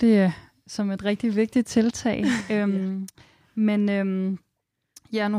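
At 2.41 s the speech drops abruptly to a noticeably quieter level, about 6 dB down, and stays there until the clip ends. The sound reads as a hard step in loudness rather than a fade, with nothing recovering afterwards. The likely cause is one channel dropping out of a stereo source: once the channels are summed to mono, the material shared by both loses half its contribution, and anything carried only by the missing side vanishes.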